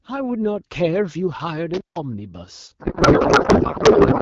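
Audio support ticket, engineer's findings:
Intermittent contact, 1.74 to 1.97 s: signal drops out for about 0.15 s, crackle at both edges, faint hiss while open. Probable loose cable or plug briefly breaking the connection.

Codec payload misread, 2.79 s to end: sound replaced by garbled noise and warble barely tracking the speech. Points to AMR packing mismatch, octet-aligned frames decoded as bandwidth-efficient. The AMR-WB path before this sounds clear, consistent with 12.65 kbit/s or higher.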